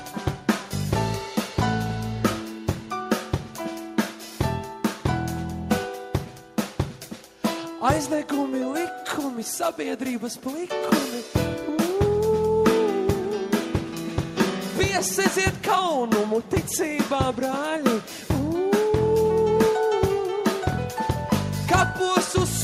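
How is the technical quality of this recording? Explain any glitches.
No glitches can be heard anywhere in this recording. There is nothing in it that needs explaining.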